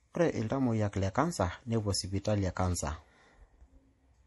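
Throughout the speech, the audio is band-limited with nothing above 11.5 kHz, and the remaining spectrum has a watery, swirling texture. This is likely MP3 compression at a low bitrate, with the damage consistent with roughly 48 kbps. Under that budget the encoder removes the treble above a fixed cut-off and discards weaker frequency components, which drop in and out between frames. That produces the plainly audible smeared, unstable quality across the whole clip.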